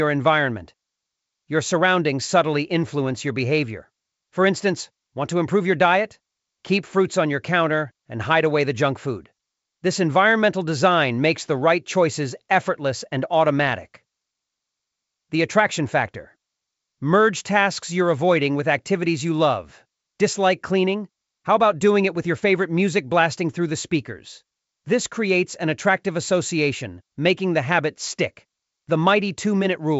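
Nothing stood out on listening to this speech, which comes through G.722 wideband telephone coding at 64 kbit/s with no content above about 7.7 kHz.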